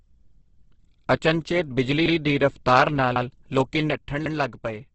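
A speech clip, with three kinds of fault. The whole clip sounds grainy and rough, with nothing above 8.2 kHz. That points to heavy Opus compression, likely in its music (CELT) mode at a low rate, around 12 kbps, where thin bands get filled with noise. Two overlapping chunks cause stutters. At 2.06 s, right after "ਅਚਨਚੇਤ ਬਿਜਲੀ", about 100 ms plays twice. It happens again at 3.16 s, after "ਬਿਜਲੀ ਦੀ ਰਫਤਾਰ ਨਾਲ". The 1.1 s spacing fits 1 s chunks, each starting 100 ms before the last ended. From 3.91 s to the end, after "ਦੀ ਰਫਤਾਰ ਨਾਲ ਲੋਕੀਂ", the level drops abruptly by about 6 dB. This fits one channel dropping out. The mono sum then keeps only the surviving channel's half of the shared sound.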